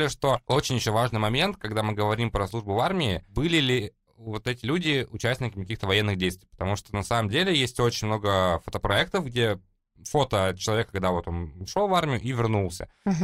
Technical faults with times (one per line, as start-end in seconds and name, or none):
none